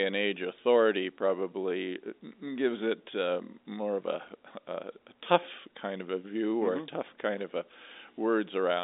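No technical faults can be heard in the speech, which comes through G.711 A-law telephone coding at 64 kbps with a line band of roughly 250 Hz to 3.7 kHz and nothing above 3.8 kHz, as that telephone path normally delivers it.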